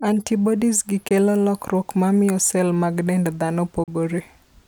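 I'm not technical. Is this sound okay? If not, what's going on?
No. The speech cuts out twice for a split second: from 1.08 to 1.11 s, just before "lokruok mamiyo cell mag", and from 3.84 to 3.88 s, right after "cell mag dend dhano". These are short Bluetooth dropouts, likely from bits of audio not reaching the headphones in time. Unlike a stutter or freeze, the speech doesn't pause and wait. It goes suddenly silent, then carries on as if it had kept playing, so a tiny piece is simply missing.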